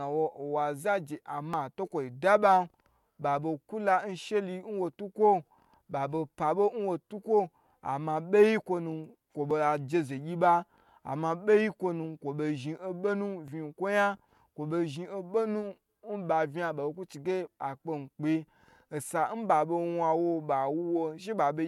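Overlap between stream segments in this speech clip: neighbouring 4-second segments claim the same few milliseconds, so the player trims real audio at each boundary. The waveform jumps, giving tiny skips at 1.54, 5.51, 9.51, 13.48 and 17.47 s, roughly four seconds apart.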